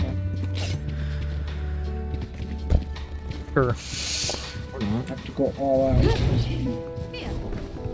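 Nothing is technically wrong with this audio, which comes through a G.722 call path at 64 kbps that leaves nothing above 8 kHz.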